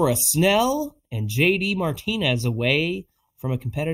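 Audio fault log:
Throughout, channel delay (comb filtering): One channel arrives later than the other by roughly a third of a millisecond, likely just a few samples. When the two are summed to mono, the shared speech cancels where the offset puts them half a cycle apart. The first notch falls around 1.5 kHz. Further notches repeat at roughly 3 kHz intervals above it. The result is a fixed, hollow, phasey tone.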